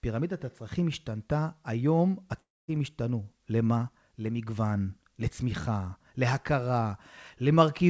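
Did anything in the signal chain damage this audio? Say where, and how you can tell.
Yes, there is a gap in the speech from 2.40 to 2.70 s. About 280 ms of audio never plays. The sound just before the gap is carried on as a buzzy tail that fades, then drops to near silence. The speech resumes at 2.70 s with that stretch simply gone. This is likely a long network dropout. The receiver's concealment stretched the last sound, gave up, and waited for packets. The call codec limits everything above 8 kHz.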